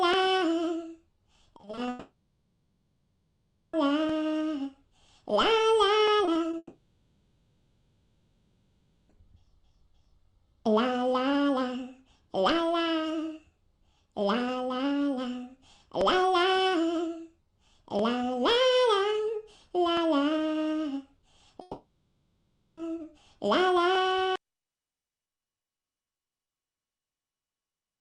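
From 1.57 to 1.89 s, repeated packet loss (robotic sound): six 20 ms gaps cover roughly a third of that stretch. Each is filled by continuing the previous sound, making it choppy. From 1.89 to 3.75 s, likely a long network dropout: the sound is stretched into a fading buzz for nearly 2 seconds before real audio returns. Three short concealed packet losses follow at 6.25 to 6.29 s, 6.33 to 6.37 s and 6.51 to 6.55 s. Each 20 ms hole is patched and blended back, heard as a brief smear or wobble. From 6.57 to 9.11 s, likely another long network dropout: about 2.5 seconds are replaced by a decaying synthetic tail, with only a 30 ms moment of true silence. From 21.61 to 22.79 s, likely a third long network dropout: about 1.2 seconds become a fading buzz before the audio resumes with that part missing.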